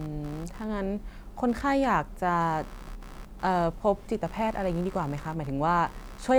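Computer activity noise runs throughout this speech clip, a buzzing pulse repeating at around 70 per second and sitting roughly 25 dB below the speech. Processor, graphics or mouse load is shifting the audio circuit's shared ground, so the buzz tracks the computer's activity, not the talking.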